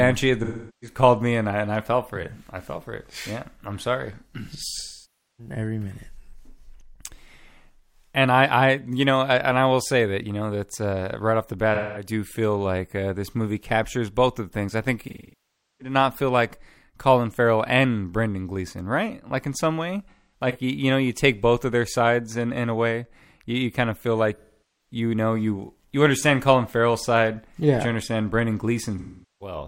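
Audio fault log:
0.44–0.97 s, 4.72–5.54 s, 11.74–12.07 s, 15.01–15.95 s, 20.10–20.56 s, 24.36–24.92 s, 28.99–29.56 s, AAC frame loss with concealment: smeared, noisy patches of 0.2–0.7 s where the decoder rebuilds lost frames from the last good spectrum.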